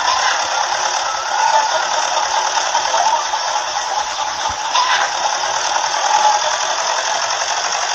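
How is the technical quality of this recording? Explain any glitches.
One glitch stands out. A call bitrate drop from 3.85 to 5.22 s starves the encoder of bits, so the audio turns coarse, watery and muffled, which fits a fall from 64 to about 15 kbps.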